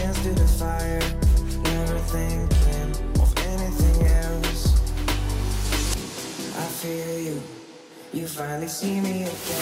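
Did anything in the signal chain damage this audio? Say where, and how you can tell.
No, nothing in the chain audibly damaged this audio.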